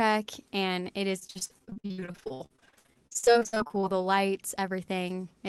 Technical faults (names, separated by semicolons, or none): repeated packet loss (robotic sound)